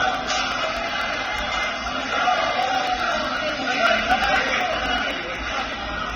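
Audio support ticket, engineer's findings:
Dull, smeary top end with nothing above 6.9 kHz, plus mixed swirly and ringing artefacts layered together throughout. Likely transcoding between lossy codecs: the texture fits a low-rate Vorbis encode re-squeezed into AAC-LC around 24 kbit/s, stacking both codecs' damage.

Regular little ticks from 0.15 s to 6.10 s, one every 0.124 s, roughly fifty in all. Periodic USB or driver dropouts: something stalls the bus or driver on a timer, and about a millisecond of audio gets skipped each time, leaving a tiny splice click.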